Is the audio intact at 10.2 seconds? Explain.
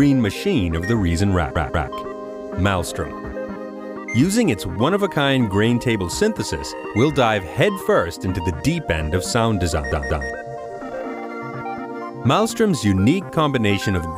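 No. From 9.92 to 10.29 s the sound stutters, replaying one short 186 ms chunk twice more. This is repeated frames: the same compressed frames decoded again, adding 0.37 s.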